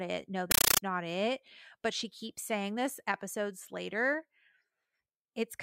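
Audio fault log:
0.51–0.81 s, compressed stream played as audio: Between "it no" and "not it but she", an undecoded Dolby Digital (AC-3) bitstream is passed through as if it were ordinary PCM samples. Each coded frame then plays as a 9.33 ms burst of noise followed by silence, repeating 31.25 times a second. The result is harsh, very loud chattering static in place of the speech, from a 448 kbps AC-3 stream.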